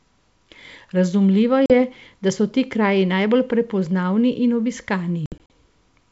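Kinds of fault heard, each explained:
Packet loss on an ADPCM call: Lost packets become hard-edged silent holes, at 1.66 s and scattered from 5.26 s. The out-of-step decoder then resumes briefly distorted.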